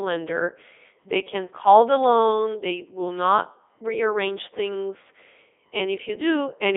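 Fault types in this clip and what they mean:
Codec 2 vocoder: speech was reduced to pitch, voicing and envelope, then rebuilt from sine waves, leaving it heavily robotic and buzzy, with nothing above 3.8 kHz.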